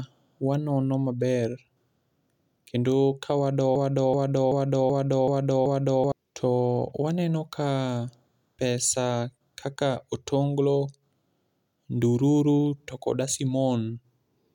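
From 3.76 to 6.12 s, a broken-record loop repeats one 0.38 s fragment six times. Playback likely stalled on it. That span's speech is lost.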